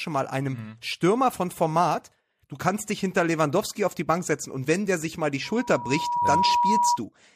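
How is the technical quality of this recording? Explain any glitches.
The recording has one clear glitch, a loudspeaker feedback squeal near the end. From 5.44 to 6.99 s a steady 963 Hz tone swells over roughly a second until it sits around 5 dB above the speech. The microphone is re-amplifying its own loudspeaker output at that frequency, so the tone grows on itself. A spectrogram shows a single bright horizontal line, and the waveform envelope swells visibly.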